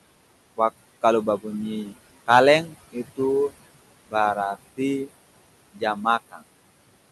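Noise suppressor artifacts run through the whole clip: room noise is pulled down by about 20 dB between phrases and swells back under speech, seen on a spectrogram as patchy, flickering background energy. Speech cut by the noise suppressor occurs from 5.73 to 6.05 s and again from 6.31 to 6.41 s, dropping quiet speech by about 18 and 17 dB, roughly a tenth of a second each. The affected sounds come across as swallowed, and the waveform shows sudden envelope dips.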